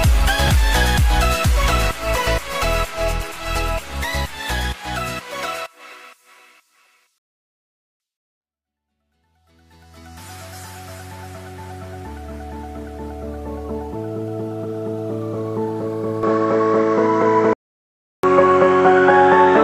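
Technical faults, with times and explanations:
0.48 s, chunks out of order: For an instant around 0.48 s, a short block of audio, about 5.33 ms long, was written one slot late and swapped with its neighbour. Nothing is missing, but the sound jumps ahead and back within a few milliseconds. The three hard joins where the misplaced block was spliced in are heard as a tiny jumbled smear.
7.18 to 8.00 s and 17.53 to 18.23 s, playback stall: The player was starved of data or its thread was held up. Output dropped to silence for about 0.82 s in the first case and about 0.70 s in the second. The sound cuts off abruptly in mid-flow and the gap hangs noticeably before audio resumes. That dead air with a sudden restart is the likely result of the output buffer running dry rather than of a gap in the source.
16.23 s to the end, input switched to a poorer device: From 16.23 s the capture likely moved to a lower-grade input, such as a headset's call profile. 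The band is now narrower, so the top end vanishes and the sound turns duller and boxier. The level shifts by about 5 dB, and a new noise floor appears about 45 dB below the signal. The change is instant, with no silence at the switch point.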